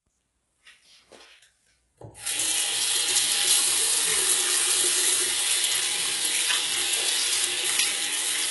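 A recording of sounds carrying heavy HE-AAC compression damage from start to finish. Nothing is present above 11.5 kHz, and the treble below that sounds synthetic and metallic, likely from spectral band replication at a bitrate around 12 kbps copying lower bands upward.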